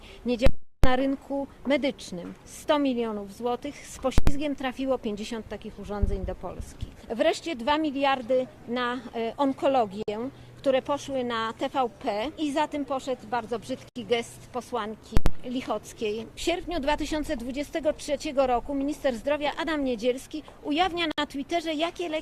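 From 0.46 to 0.84 s, invalid numbers at full scale: a calculation produced infinite or invalid values that were pinned to one extreme value for 0.37 s, which fits a 16384-sample block. It is heard as a very loud pop at each edge with nothing between. The same fault recurs at 4.18 s and again at 15.17 s, each 0.09 s long, consistent with 4096-sample blocks, and each is heard as a single bang.

At 10.03 s, 13.89 s and 21.12 s there is a gap at a join of encoded pieces. Separately encoded sections were joined untrimmed, so encoder start delay and end padding leave silences of 54, 68 and 64 ms. Each cuts into continuous sound with smeared edges, and the sound then resumes where it stopped.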